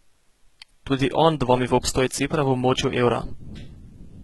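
Throughout the speech, s sounds and upper treble turn gritty and metallic, with nothing above 11.8 kHz, likely heavy HE-AAC compression rebuilding high frequencies from copied lower bands.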